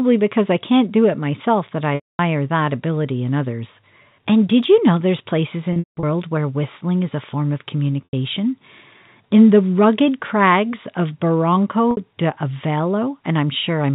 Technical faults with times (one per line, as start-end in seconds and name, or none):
1.95-2.19 packet loss with pitch repetition
5.73-6.03 packet loss with pitch repetition
8.04-8.13 packet loss with pitch repetition
11.91-11.97 packet loss with pitch repetition